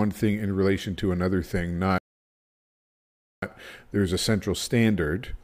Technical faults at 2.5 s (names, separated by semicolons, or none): rebuffering stall